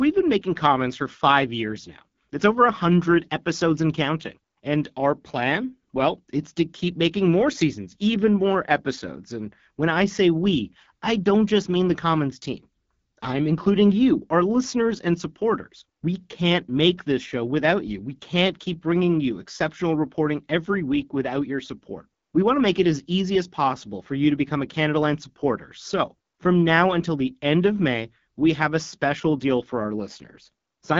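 Speech runs through the AMR wideband (HD Voice) codec for the whole clip, with plainly audible rough, raspy coding damage and nothing above 7.4 kHz. The harshness fits one of its lowest modes, around 8.85 kbit/s, and the hiss-like top band separates it from narrowband telephone coding.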